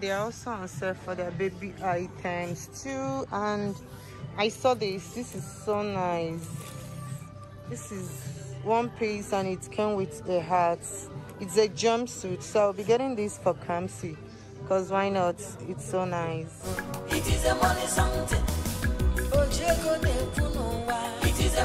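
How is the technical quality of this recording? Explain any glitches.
The recording carries a steady clicking fault from 0.17 s to 21.64 s: clock slip clicks, faint regular ticks about five times a second, roughly a hundred in all, strongest on loud sustained sound. The likely cause is two unsynchronised device clocks differing by around 100 ppm, each tick being a single dropped or repeated sample.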